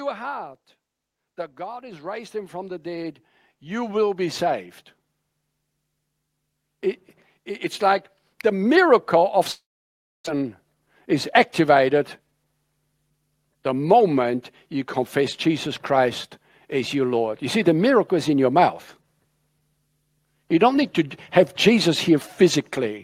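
After "heart that", automatic gain rising lifts voice and background together by about 13 dB from 1.58 to 4.61 s, then about 4 dB from 7.35 to 9.12 s. It is a slow swell, not a sudden level step. From 9.51 to 10.28 s the sound smears into a fading buzz, then about 640 ms of silence, and roughly 600 ms of audio never returns, likely a long network dropout rather than a local glitch. From 10.35 to 12.20 s a jitter buffer speed-up trims roughly 150 ms of pitch periods, so speech runs about 107% fast at unchanged pitch, hurried but not chipmunk-like.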